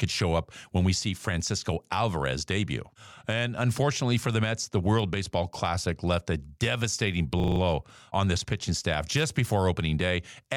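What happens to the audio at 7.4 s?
A system hang loop runs from 7.4 to 7.6 s. The system stalled while the audio hardware kept replaying its ring buffer, so one 40 ms slice of speech repeats about five times. At 25 Hz this gives a rapid, rattling stutter.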